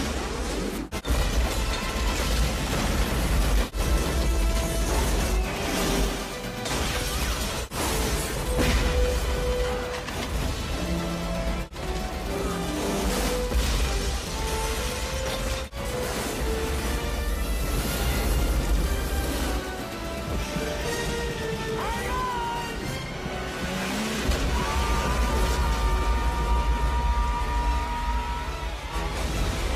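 At 5.95 s a call bitrate drop sets in, and the sound turns rough and muffled as the encoder is forced to code far more coarsely. The degradation is consistent with a fall from about 96 to 28 kbps and holds at its worst for about 5.4 s before recovering at 14.41 s. A second call bitrate drop begins at 22.01 s, bottoming out for about 4.8 s and lasting to the end. On a spectrogram, the upper band goes dark across both spans while the waveform stays intact.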